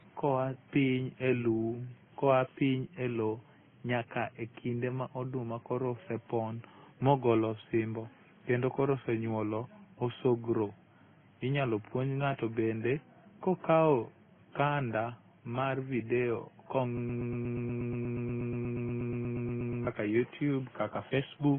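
From start to finish the speech carries the marks of transcoding between lossy codecs. Nothing reaches above 3.4 kHz, and two layers of artefact sit on top of each other: a coarse, swirly smearing that fits a low-rate AAC-LC stage around 16 kbit/s, and a later layer of Opus-style graininess. The likely cause is a second encoder at roughly 32 kbit/s spending its bits re-coding the first codec's damage, so the narrow band and both sets of artefacts remain.

From 16.97 s to 19.87 s a broken-record loop takes over. A fragment of about 120 ms repeats exactly, back to back, 24 times, giving a rapid stuttering buzz instead of continuing speech. This is likely a player, encoder or stream that stalled and kept resending the last fragment it held. Whatever should have played during those 2.9 seconds is lost.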